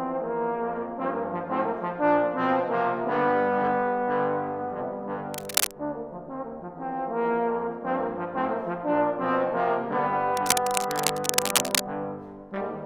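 Two bursts of cable scratch noise cut into the audio, from 5.33 to 5.73 s and again from 10.35 to 11.84 s, each a rough, uneven crackle about as loud as the sound itself. The likely cause is a worn lead or connector being handled, its contact flickering.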